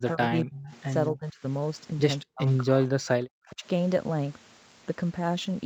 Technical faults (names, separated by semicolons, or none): sample clock jitter; speech suppressed in double talk; echo leak